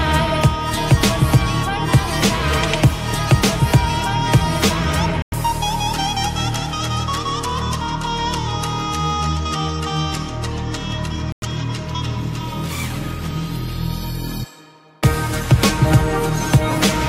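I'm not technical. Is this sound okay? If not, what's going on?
No. There are two short breaks in the sound, at 5.22 s and at 11.32 s. Each is a gap between chunks. The audio was handled in pieces about 6 seconds long, and a tenth of a second of silence ended up between pieces. The sound stops abruptly, stays silent for 100 ms, then picks up again. Nothing is cut out. The sound is only interrupted at each join.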